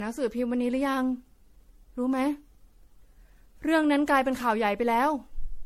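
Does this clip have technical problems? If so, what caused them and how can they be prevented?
Yes. The speech carries generation loss throughout: a swirly, smeared, hollow quality with blurred consonant attacks, most likely from being decoded and re-encoded around ten times with a lossy codec, consistent with MP3 at about 64 kbit/s. Each pass re-quantises on a shifted frame grid, so noise and spectral gaps accumulate. A spectrogram shows nothing above 16.5 kHz, patchy holes and smeared transients; the waveform shows softened onsets. To prevent it, keep a lossless master and encode to a lossy format only once, at the final step.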